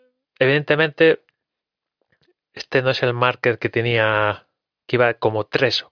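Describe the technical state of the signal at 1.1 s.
At 1.1 s the speech signal is intact, with no dropout, distortion, glitch or other technical fault audible at that moment.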